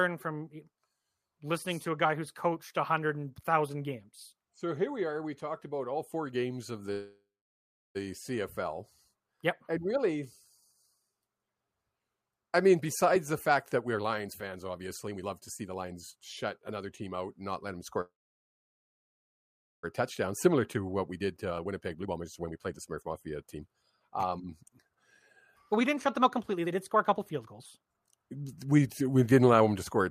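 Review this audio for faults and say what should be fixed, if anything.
Call audio freeze at 6.91–7.97 s, right after "all four games of", and at 18.01–19.85 s. The sound trails off into silence for about 0.7 s and 1.7 s, then resumes where it stopped with nothing lost, likely because packets stalled and the jitter buffer emptied.

Jitter buffer speed-up at 12.70–16.16 s (123%), 16.58–17.96 s (108%), 20.46–24.98 s (126%) and 25.39–29.68 s (116%). The receiver trims pitch-period slices to shed the accumulated delay, roughly 0.1 to 1 s per stretch. The speech is hurried but keeps its pitch.

Fix by stabilising network delivery and letting the jitter buffer drain its backlog more gradually.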